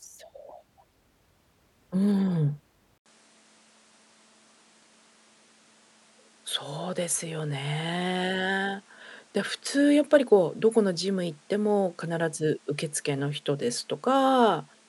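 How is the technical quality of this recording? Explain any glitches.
Quality drops partway through. From 2.98 s to the end, the input likely switched to a poorer device: after an 80 ms gap, the speech loses everything above 11.4 kHz, falls about 5 dB, and gains new background noise.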